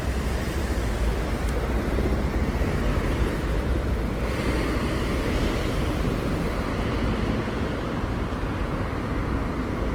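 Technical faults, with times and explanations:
Throughout, Opus compression: the sound is grainy and rough, with tonal parts turned noisy, the likely result of Opus in its music (CELT) mode at a low bitrate, consistent with about 16 kbps. Short of bits, the encoder keeps each band's energy but fills the detail with folded or noise-like content. A spectrogram shows content all the way up to 20.1 kHz with few holes, but harmonics look smeared into speckled, noisy bands. The waveform shows no obvious change.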